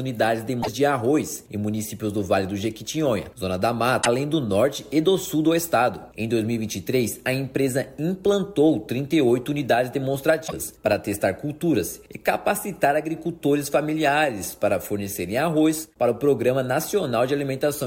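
Three spots of damaged data in a compressed stream show up, at 0.59 to 0.69 s, 3.99 to 4.07 s and 10.44 to 10.53 s, each lasting under a tenth of a second. In each, the decoder hit corrupted bytes, misread or rejected the frames there, and had to hunt for the next valid frame header before it could pick the sound back up. What comes out is a brief glitch, a chirp, squawk, click or short gap, where the stream broke.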